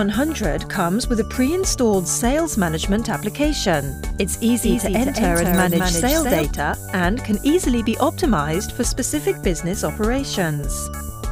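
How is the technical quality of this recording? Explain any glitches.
One glitch stands out. From 4.60 to 6.42 s there is a doubled audio track. A second copy trails by roughly 200 ms, about 5 dB quieter. It likely comes from a slower capture path. It starts and stops abruptly, with no decay.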